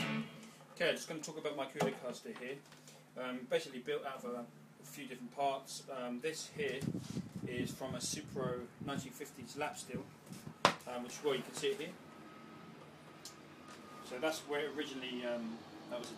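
Nothing stood out on listening; no technical fault could be heard anywhere in the audio.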